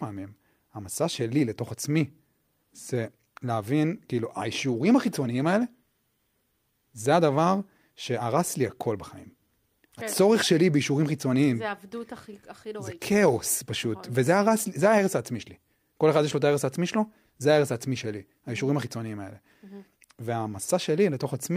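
No technical faults can be heard anywhere in the recording.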